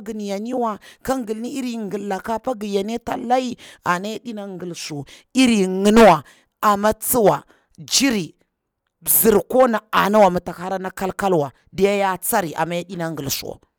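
No technical faults are audible anywhere in the speech recording.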